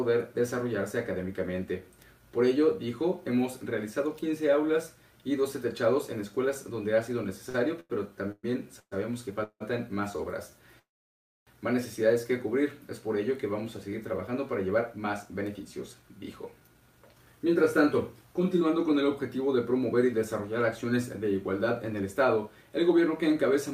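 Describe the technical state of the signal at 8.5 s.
At 8.5 s the audio is inside a stretch of repeated stalls (stutter) running from 7.49 to 9.62 s. Late packets repeatedly emptied the jitter buffer, so five gaps, the longest 168 ms, were bridged by extending the preceding sound. It drags and hiccups, and spectrograms show smeared, frozen bands where waveforms repeat and fade.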